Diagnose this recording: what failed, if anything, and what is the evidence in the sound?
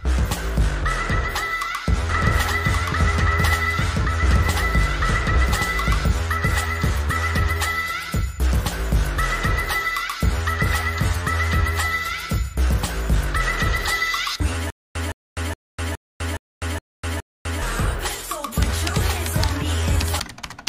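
A doubled audio track runs from 2.09 to 6.05 s, most likely from a second, slower capture path or an edit that left two copies out of step. A full-band copy trails the original by about a second at roughly the same level, with no decay or room colour, so it reads as a duplicate rather than an echo. It cuts in abruptly at 2.09 s and drops out just as sharply at 6.05 s.

A stutter with silent gaps occupies 14.70 to 17.62 s, likely from a playback or streaming buffer that stalled and, on each retry, replayed its last fragment before running dry. The same 166 ms burst returns seven times at an even 417 ms period, with 250 ms of digital silence between repeats. Whatever should have sounded during that stretch is lost, not delayed.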